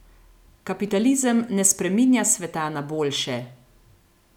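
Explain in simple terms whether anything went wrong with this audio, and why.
Two sharp clicks cut through the speech at 0.88 s and 1.71 s, just before "spreminja sveta na", likely from dropped samples, where a fraction of a millisecond vanishes and the waveform jumps.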